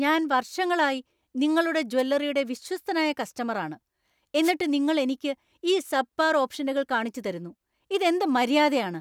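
A brief swish of static cuts in at 1.98 to 2.02 s, just after "ഞാൻ വർഷങ്ങളായി നിങ്ങളുടെ", and a longer burst follows at 4.41 to 4.53 s, right before "നിങ്ങൾ എനിക്ക് ഈ സബ്പാർ". Both are wireless microphone noise hits: the FM radio link faded as reflected signals cancelled, letting receiver noise rise.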